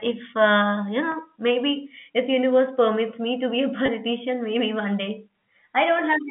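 At 1.12 to 1.14 s, after "if uh you", and again at 3.86 to 3.88 s, just before "maybe one day", packet loss with pitch repetition bridges a 20 ms gap, consistent with one lost packet, by repeating the last pitch period, giving a brief held, buzzy sound over the telephone-band G.711 line.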